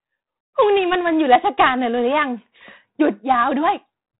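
Right from the start and all the way through, this speech has heavy 4-bit ADPCM compression: each sample is coded as a coarse step from a guess, so a gritty hiss rides every loud syllable. Nothing sits above 3.9 kHz, which fits a 32 kbps stream.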